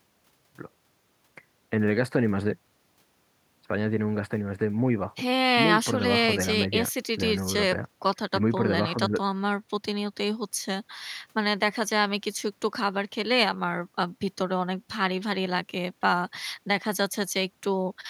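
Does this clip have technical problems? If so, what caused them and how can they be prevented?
No, there's nothing wrong to hear in this bit of speech, so there's no cause to track down and nothing to guard against.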